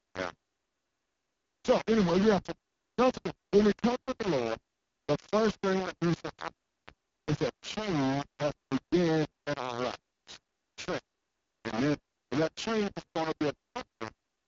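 Low bit depth without dither runs through the whole speech clip. The speech carries a coarse, gritty distortion that moves with the level, and the quiet parts break up into a sputtering buzz instead of fading smoothly. The error sits only about 10 dB under the signal. This is likely caused by the signal being rounded to very few amplitude steps, consistent with a 3-bit word length, without dither to decorrelate the error.

The AMR wideband (HD Voice) codec damage is also present from start to finish and is heavy. The speech sounds rough and raspy, with a buzzy, synthetic edge from the pulse-excited vocal tract model working at too few bits, which points to the codec's lowest rate, 6.6 kbit/s. Nothing is present above 7.3 kHz, and the top band between 6.4 and 7 kHz sounds like hissy filled-in noise rather than real detail.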